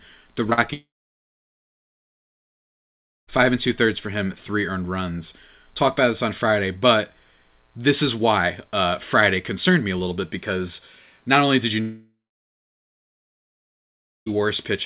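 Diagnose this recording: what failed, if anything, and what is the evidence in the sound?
Packets went missing on the network twice in quick succession, at 0.50 to 0.53 s and again at 0.53 to 0.59 s, and the receiver's concealment covered both gaps. This is short concealed packet loss. The decoder extended the preceding sound to fill about 12 ms and then 40 ms, so the audio briefly smears and wobbles before it rejoins the real signal, all within the 4 kHz band of the G.711 call path.

The audio stops twice for long stretches: from 0.73 to 3.29 s, and from 11.81 to 14.28 s, right after "not only did you". Each time a short, fading continuation of the last sound gives way to silence, about 2.4 s in the first gap and about 2.1 s in the second. Speech then resumes further on, and the missing stretch is simply gone. The likely cause is a long network dropout, with no packets arriving at the receiver for roughly two and a half seconds.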